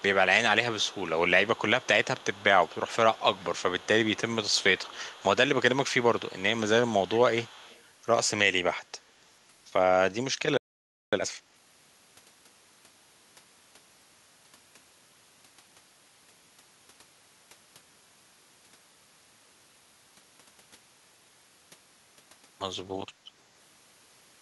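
Echo leak from 0.79 to 5.48 s, 5.9 to 6.42 s and 6.84 to 7.82 s: a faint copy of the speech trails it by 155 ms, far below the direct sound. The likely cause is a far-end loudspeaker whose echo canceller let part of the microphone pickup return.

Playback stall from 10.57 to 11.13 s: the speech cuts off mid-flow into about 0.55 s of silence before resuming, likely because the player ran out of buffered data or its output thread was blocked.

Time-compressed catch-up from 11.13 to 11.67 s: right after the gap, the speech runs at twice normal speed with unchanged pitch. The player is trimming its backlog by cutting out and cross-fading short pieces, which gives a hurried sound.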